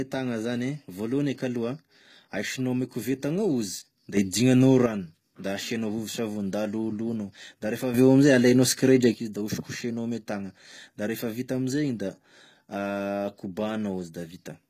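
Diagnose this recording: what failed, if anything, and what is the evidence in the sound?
The codec stage shows damage across the whole speech clip. The treble sounds bright but synthetic, with sibilants turning gritty and lispy and upper harmonics failing to line up with the lower ones. That points to HE-AAC compression at a low bitrate around 20 kbps, which is likely the cause: spectral band replication copies lower bands upward under a coarse envelope. On a spectrogram the upper band looks smeared and blocky, repeating lower-band patterns, with nothing above 14.9 kHz.

A processing stage applied two sudden gain jumps. From 4.17 to 4.86 s, just before "da asianao vovosavony", the level steps up by about 8 dB. From 7.94 to 9.14 s, just before "izy da osokosoinao ame", it rises by about 9 dB. Speech and background noise rise and fall together, which fits a digital gain change applied without a ramp, likely a setting or bit-shift switch. 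A waveform shows abrupt rectangular steps in the envelope at each edge.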